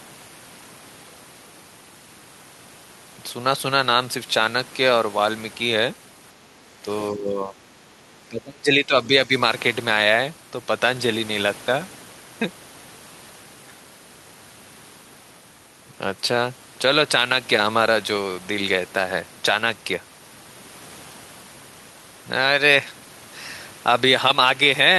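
A speech recording in which the talker's level dips at 6.82–6.86 s, 7.11–7.62 s and 8.29–9.33 s, by up to roughly 20 dB in the last stretch, which is likely speech suppressed in double talk. Between 7.9 and 8.0 s the room sound drops by about 6 dB, background gated by the echo canceller as it clamps the microphone during loudspeaker playback.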